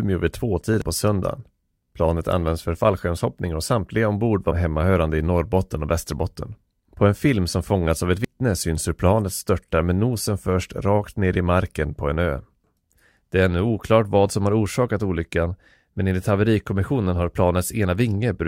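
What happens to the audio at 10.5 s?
Nothing goes wrong at 10.5 s; the speech carries on intact there.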